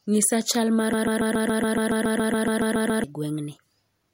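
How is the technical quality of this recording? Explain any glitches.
The recording is marred by a broken-record loop. Just after "chal mar", from 0.93 to 3.04 s, a fragment of about 140 ms repeats exactly, back to back, fifteen times, giving a stuttering, machine-gun effect. The likely cause is a stalled player or stream resending its last buffer, so the speech that belonged there is lost.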